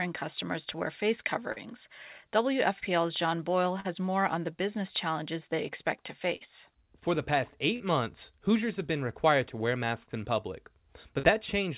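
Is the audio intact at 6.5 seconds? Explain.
No. Just before 6.5 s the clip has a burst of packet loss running from 6.36 to 6.49 s, immediately after "challenges they expect to". Audio arrived too late or not at all for about 46 ms, so the receiver extended the last received sound and faded it down, producing a held, fading continuation of that sound instead of real signal. Playback then resumes slightly further along, with a short stretch of the original missing.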